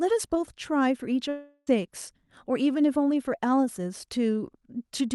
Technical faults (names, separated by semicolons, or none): long network dropout